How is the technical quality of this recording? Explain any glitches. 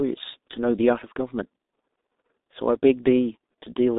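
The quality is poor. Throughout, the speech carries heavy G.723.1 codec damage. Nothing passes above 3.8 kHz, and coarse, slow frame modelling fits roughly 6 kbit/s. Consonants blur, and the voice sounds muffled and hoarse.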